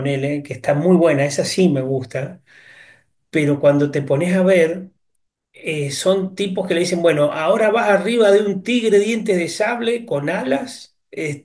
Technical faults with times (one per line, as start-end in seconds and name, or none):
none